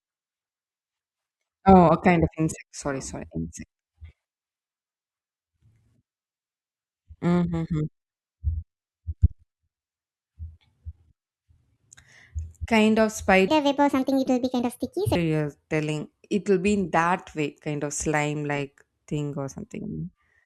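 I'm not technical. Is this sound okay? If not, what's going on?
No. From 13.48 to 15.15 s, right after "kind of", there's a section at the wrong speed: the speech plays about 1.5 times too fast and jumps roughly seven semitones higher, likely from a clock mismatch. It's back to normal by "you're telling it will".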